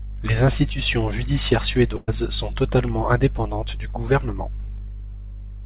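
From 1.96 to 2.09 s, after "institutions judiciaires", a burst of packet loss left the receiver without audio. It extended and faded the last sound for 114 ms, then resumed at "sont totalement indépendantes du" with 120 ms missing, heard as a brief fading continuation of the last sound.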